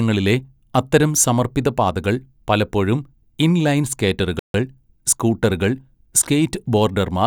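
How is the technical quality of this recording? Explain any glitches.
One glitch affects the speech. At 4.39 s, after "പാതകൾ പലപ്പോഴും ഇൻ ലൈൻ", a playback stall silences the audio for 0.15 s. The player likely ran short of data. The sound then resumes.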